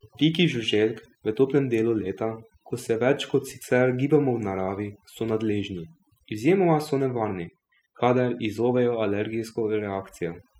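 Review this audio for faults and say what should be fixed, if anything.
Overdone noise removal runs through the whole speech clip. A noise reduction process was set too aggressively. It pushes individual frequency bands far down whenever they sit near its noise estimate. Quiet parts of the speech get caught and removed along with the noise. The result is a lowered background with twinkling, chirpy specks. To prevent it, use gentler reduction settings and check the result against the original before committing.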